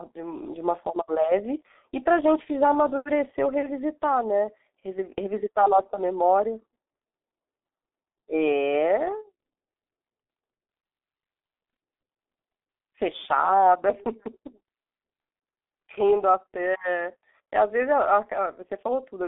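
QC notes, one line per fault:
Throughout: G.723.1 codec. The speech is confined to a narrow telephone band of roughly 250 Hz to 3.6 kHz, with nothing above 3.8 kHz, and its voice model updates slowly across long frames. That leaves it muffled and hoarse with smeared consonants, consistent with a low bitrate near 6.3 kbit/s.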